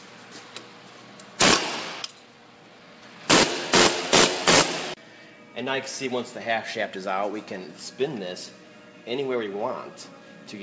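The audio has passed through a call path with a band limit at 8 kHz, which fits a wideband codec such as G.722. Two faults follow each other closely. First comes a skip ahead between 2.02 and 2.04 s. Playback jumps forward with no gap filled in. Roughly 0.7 s of audio is missing. The two sides of the jump are joined almost directly. This happens when a stretch is dropped in transit, or discarded by an overflowing jitter buffer, while later audio is already waiting. Right after, from 2.12 to 3.16 s, there is a jitter buffer speed-up. The audio runs at about 112% speed with its pitch unchanged, so it sounds hurried. The buffer was holding more audio than its target. To cut that delay, the receiver removed short pieces of one or a few pitch periods, many times in a row. Around 150 ms is taken out in total.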